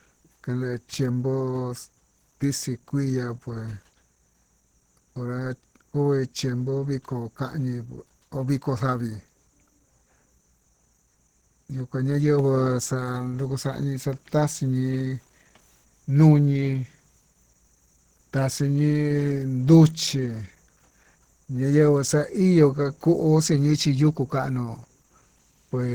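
From start to finish, the speech sounds hoarse and somewhat muffled. Voiced sounds have a rough, grainy edge. The damage is plainly audible, though content reaches up to about 20.2 kHz. This is likely Opus compression at a low rate, which fits roughly 16 kbps. The encoder seems to be running in its hybrid speech mode. There, the upper bands are filled with shaped noise rather than true detail.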